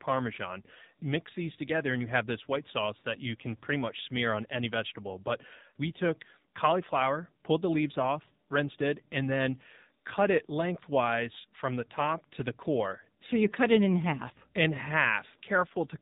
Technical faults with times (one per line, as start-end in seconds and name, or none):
0.00-16.01 AMR narrowband mobile codec